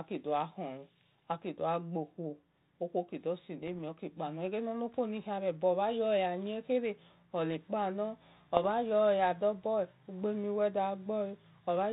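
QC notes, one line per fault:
3.62–3.73 s and 8.57–8.65 s, bit errors on an ADPCM link: brief pops with rough bursts and short level jumps. Each flipped bit throws off the decoder's step size and predictor, so the damage rings on for some milliseconds. Packet loss would leave gaps or repeats instead. The band-limited G.726 path underneath, which fits 32 kbit/s, adds only light grain.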